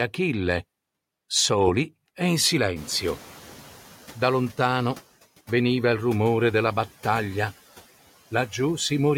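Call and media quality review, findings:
Noise suppressor catching up, 2.76–5.02 s, after "soli e in": room noise jumps about 22 dB near 3 s, leaks through, then sinks about 7 dB as the estimate adapts over 2.26 s.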